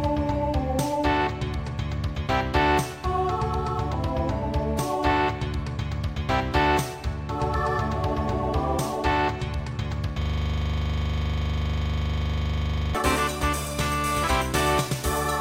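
At 10.22 s the audio locks into a system hang loop that runs until 12.95 s. Something upstream, the machine or its audio driver, stopped feeding new samples, so the sound hardware kept replaying the same 40 ms slice of its buffer, over and over. At that length it repeats 25 times a second, dozens of passes in all, so you hear a rough, rattling stutter at 25 Hz rather than any new sound.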